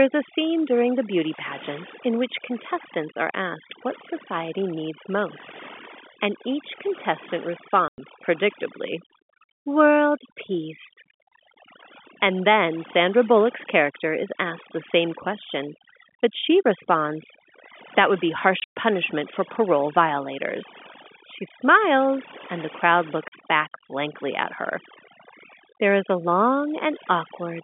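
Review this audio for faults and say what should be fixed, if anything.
Overdone noise removal runs through the whole clip. Bands near the noise floor are cut away. The background drops and breaks up into twinkling specks. Set the noise reduction gentler, or clean the noise at the source.

Packet loss filled with silence cuts three holes. The first, at 7.88 to 7.98 s, comes after "most and each contestant" and lasts 100 ms. The second runs from 18.60 to 18.74 s, between "would be" and "for parole violators". About 140 ms is lost in scattered gaps over 160 ms, the longest run being 120 ms. The third, 40 ms at 23.28 to 23.32 s, falls between "smiles and the crowd" and "back blankly at her". Each gap is a multiple of 20 ms, which fits 20 ms packets, and the holes have hard edges. Use packet loss concealment and a jitter buffer so the receiver fills gaps with plausible audio.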